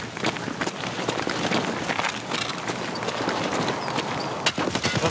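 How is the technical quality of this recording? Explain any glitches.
The recording has gain pumping from start to finish. The level drops by around 20 dB under each loud sound, so the level breathes constantly and loud and soft passages sit squashed close together. The likely cause is input gain set far too high, with a fast limiter or compressor clamping down on every peak. A noise gate would cut the background to near-silence in the gaps, which is a different fault. The audio also passed through a call path, and nothing is heard above 8 kHz, which fits a wideband call codec such as G.722.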